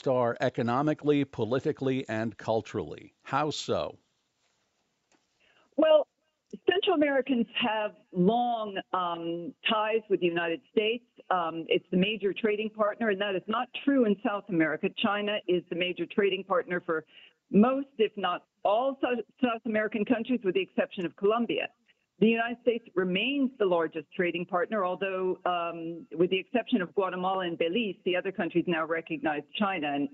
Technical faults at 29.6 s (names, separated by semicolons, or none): none